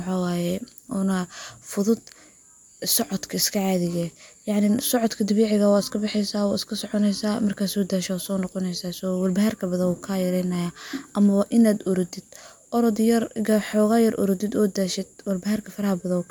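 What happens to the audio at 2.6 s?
Nothing goes wrong at 2.6 s; the speech carries on intact through that moment, with no dropout, click or other fault.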